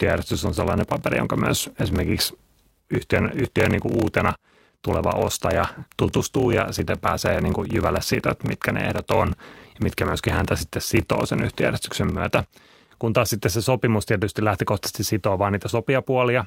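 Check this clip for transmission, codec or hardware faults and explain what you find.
One fault is present, a block size mismatch (padded), from 0.0 to 12.97 s. Each output block ends in a short run of zeros, which fits 1024-sample blocks being read as 1152-sample blocks. The sound buzzes at 38.3 Hz and plays slowed to 0.889 of normal speed. The waveform shows regular flat gaps, and the spectrogram shows thin vertical stripes spaced about 26 ms apart.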